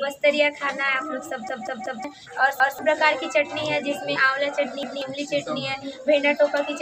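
Repeated buffer at 1.49–2.04 s, 2.60–2.79 s and 4.83–5.02 s. Late audio made the device replay its last block of about 186 ms, which fits an 8192-sample buffer. The first instance stutters three extra times, losing about half a second; the others repeat once, losing roughly a fifth of a second each, with hard joins.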